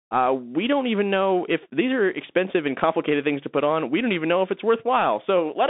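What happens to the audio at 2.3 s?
At 2.3 s the speech is still passing through the Bluetooth CVSD headset codec, which affects the whole clip. The coder sends one bit per sample, only up or down, with an adapting step, which fits a 64 kbps stream. The sound is narrowband, roughly 200 Hz to 3.7 kHz, with granular hiss, scratchy sibilants and slope-overload distortion on loud high-frequency peaks. A spectrogram shows a hard ceiling near 3.8 kHz and a speckled noise floor.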